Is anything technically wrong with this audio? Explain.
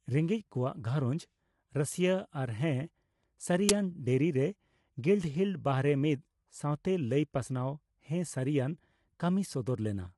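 Yes. Throughout the speech, coding damage is plainly audible: the voice sounds rough and grainy, with noise between harmonics. This is likely low-delay AAC compression (AAC-ELD) at a low bitrate around 32 kbps. On a spectrogram, energy stops dead at 11.6 kHz, with smeared texture between harmonic lines.

At 3.69 s an uninitialised buffer plays leftover memory as audio, heard as a loud crack. Its length fits a 512-sample buffer. The waveform shows a brief block of jagged, unrelated samples, and the spectrogram shows a thin broadband stripe.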